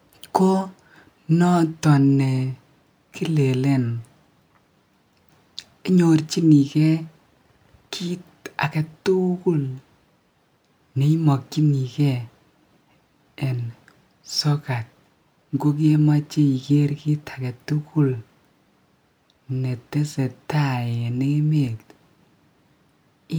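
Nothing to report: no technical faults anywhere in the speech.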